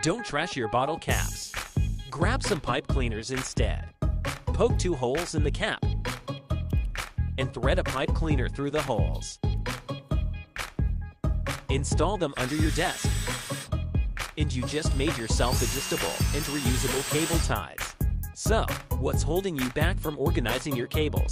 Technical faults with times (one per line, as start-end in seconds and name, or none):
none